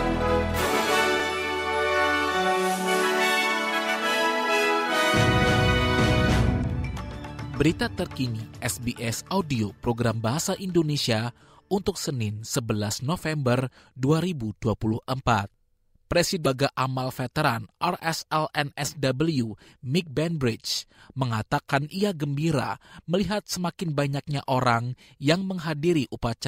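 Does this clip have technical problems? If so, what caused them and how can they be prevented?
Yes. Damaged data in a compressed stream at 16.42 to 16.46 s produces a brief glitch lasting about 40 ms. Corrupted bytes in that stretch left the decoder unable to read the frames, so it lost sync and hunted for the next valid frame header before the sound resumed. Verifying file integrity with checksums, using reliable transfer and storage, and keeping metadata out of the audio data path would prevent it.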